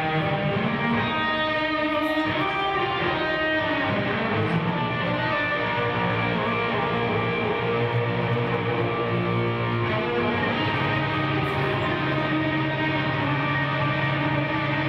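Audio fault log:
Nothing stood out as a fault on listening.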